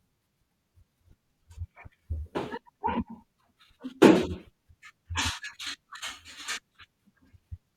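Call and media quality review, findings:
Compressed frames skipped, 1.11 s: audio jumps ahead, roughly 20 ms of audio gone, fits about two 10 ms frames lost in the decoder path. Waveform shows a jump in envelope. Spectrogram shows a thin vertical seam. Compressed frames skipped, 5.53 s: larger jump, roughly 70 ms missing, fits around seven 10 ms frames. The spectrogram shows a misaligned discontinuity.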